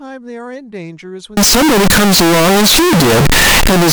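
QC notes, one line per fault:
1.37–3.92 s: signed and unsigned mixed up. From 1.37 s to the end the speech turns into very loud, harsh distortion, with quiet stretches as loud as the rest. The 16-bit samples were likely read with the wrong sign convention, flipping the top bit so each zero crossing jumps across the full range.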